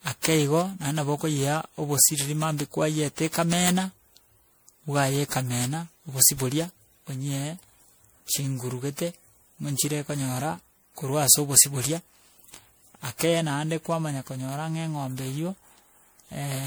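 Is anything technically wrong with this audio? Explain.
Yes. Throughout the speech there is a swirly, smeared, hollow character, with consonant attacks softened and a watery noise clinging to the voice, far rougher than a single moderate-rate encode would sound. This is likely generation loss: the audio was decoded and re-encoded around ten times, in a way that fits MP3 at about 96 kbit/s. Each pass re-quantised on a shifted frame grid, so noise and spectral gaps compounded, though content still extends to about 20.9 kHz.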